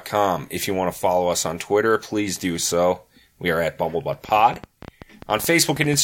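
Likely interference or a faulty connection or power supply injects a train of clicks from 4.13 to 5.95 s, just after "are at": about twenty uneven ticks, roughly 10.5 per second, around 5 dB above the speech.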